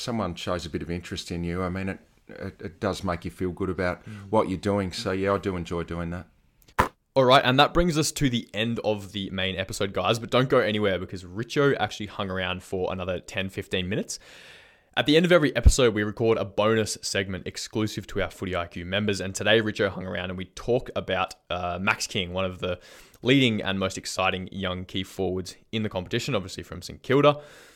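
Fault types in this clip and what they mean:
No faults detected.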